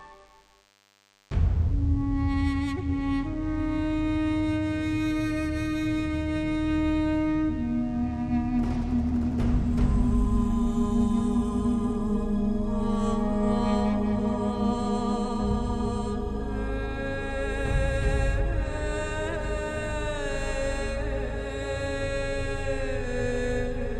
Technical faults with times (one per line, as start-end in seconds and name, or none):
0.00-10.47 DECT cordless phone buzz